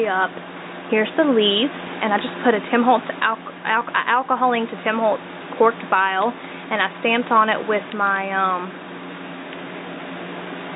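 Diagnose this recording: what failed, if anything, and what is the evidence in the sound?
Nothing failed here as far as I can hear, and the audio holds together from one end to the other with no stage in the chain giving itself away.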